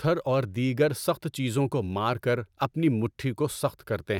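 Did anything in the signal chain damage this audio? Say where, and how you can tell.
No, nothing in the signal chain has audibly damaged this speech recording. Listening through it, no stage from capture to playback leaves a mark that points to a fault.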